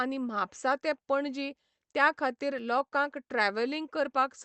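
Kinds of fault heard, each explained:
Repeated stalls (stutter): Just after "म्हापसा ते पणजी त्या", from about 2.39 to 2.93 s, the speech catches and drags in four brief hitches, the longest 28 ms. Packets arrived late, so the jitter buffer ran dry and the receiver stretched the last sound to cover about 56 ms. Nothing is lost.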